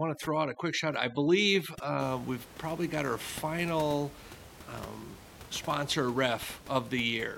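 From 0.0 to 2.0 s, just before "we've probably got our", overdone noise removal pushes individual frequency bands near the noise estimate almost to silence, leaving twinkling specks; afterward the room noise (about 18 dB below the speech) returns.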